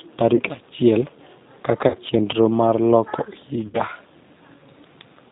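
Across the whole clip the speech carries the G.729 codec at 8 kbit/s, its damage plainly audible as a slightly rough, synthetic edge. The decoder rebuilds each frame from a vocal tract filter and sparse pulses, so a spectrogram shows a hard ceiling at 4 kHz with nothing above it.

VoIP packet loss concealed by the speech codec then strikes three times: 0.35 to 0.42 s, 1.88 to 1.97 s, and 3.66 to 3.82 s. Each is longer than the last: about 40 ms, 60 ms and 80 ms of missing audio, which fits two, three and four dropped packets. The decoder stretches its last pitch and filter with falling gain, producing a buzzy tone or coloured noise that fades, and a weak or distorted recovery afterwards. On a spectrogram these appear as frozen, smeared harmonic bands. On a waveform they appear as a repetitive, steadily shrinking envelope.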